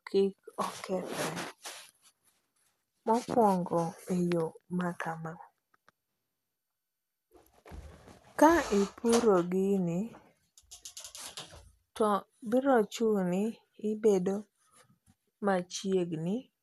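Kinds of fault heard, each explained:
MP2 compression: The speech sounds dull, with nothing at all above 12.2 kHz, and a gurgling, grainy edge runs through the whole thing, plainly audible. That's likely MPEG Layer II coding squeezed hard, something like 80 kbps by the sound of it. The coder runs short of bits, so it shuts off the top sub-bands entirely and quantises the remaining ones coarsely, and bands flutter in and out as the bit budget shifts.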